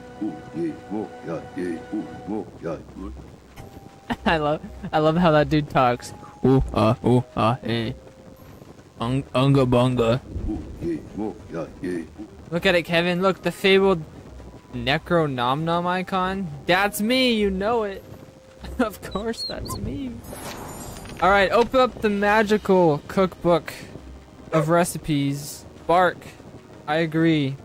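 A nearby DECT handset or base station sends radio bursts 100 times a second that the audio circuit rectifies, leaving a thin DECT buzz at 100 Hz, roughly 40 dB below the signal, throughout.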